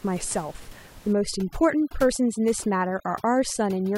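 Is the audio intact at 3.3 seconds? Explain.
No. From 1.13 s through to the end of the clip, overdone noise removal is at work: the noise reduction is set far too aggressively, so any frequency band that sits close to its noise estimate gets pulled down hard or switched off, taking the quieter parts of the speech with it. At 3.3 s the room noise, about 22 dB under the speech, has dropped and broken up into twinkling, warbling specks.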